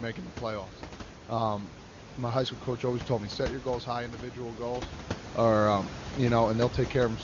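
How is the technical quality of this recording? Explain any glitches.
Nothing in this recording stood out as a glitch or technical problem on listening.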